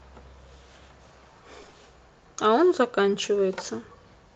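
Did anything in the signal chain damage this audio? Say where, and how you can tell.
Yes. Repeated packet loss (robotic sound), a network fault, hits 1.61–1.77 s. Four roughly 20 ms gaps are patched with repeated sound, showing as striped, frozen spectrogram frames.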